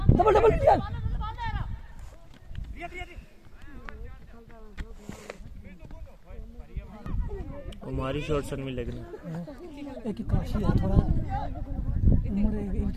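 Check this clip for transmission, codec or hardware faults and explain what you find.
Nothing stood out on listening, and I heard no transmission, codec or hardware problem anywhere in the clip.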